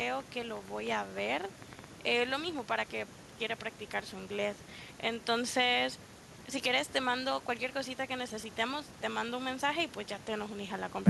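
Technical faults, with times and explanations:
0.02 to 2.6 s, train of clicks: about fifteen sharp, similarly shaped pops tick over the speech at an uneven pace, averaging 6.24 per second, and they keep going through the pauses. Their peaks stand roughly 10 dB above the programme, so they cut through clearly. The likely cause is interference or a faltering interface injecting pulses. On a waveform they appear as thin isolated spikes; a spectrogram shows narrow vertical broadband lines at irregular intervals.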